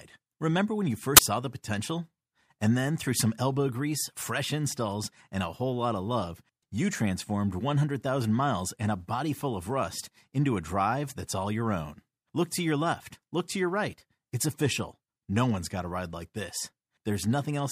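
A speech recording with one uninitialised buffer fault at 1.17 s, between "when you" and "saw the potential". A loud burst of digital noise cuts in for about 20 ms. An audio block was played before any samples were written to it. Stale memory contents came out as sound.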